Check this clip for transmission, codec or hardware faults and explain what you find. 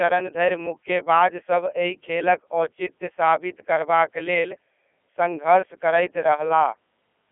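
A Codec 2 vocoder affects the whole clip. The speech is reduced to pitch, voicing, energy and spectral envelope, then rebuilt from sine waves. It sounds heavily robotic and buzzy, within 300 Hz to 3.4 kHz and nothing above 3.5 kHz, which fits a 3.2 kbit/s mode.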